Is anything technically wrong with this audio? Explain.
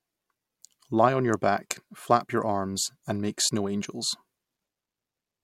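No, nothing technically wrong can be heard in this speech clip. There is no fault to point to anywhere in the recording.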